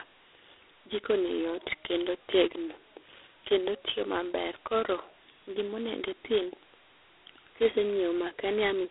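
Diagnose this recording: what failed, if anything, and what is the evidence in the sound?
Harsh, rasping hiss rides on the speech throughout, rising with its level, with nothing above 3.8 kHz: a codec fault, G.726 ADPCM coding too few bits per sample, which fits 16 kbit/s.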